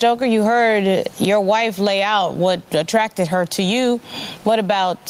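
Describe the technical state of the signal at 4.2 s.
At 4.2 s the speech sounds squashed, and the room noise, normally about 38 dB below the speech, rides a gain swing of about 15 dB. This gain pumping runs throughout, likely from input gain set far too high with a fast limiter clamping every peak.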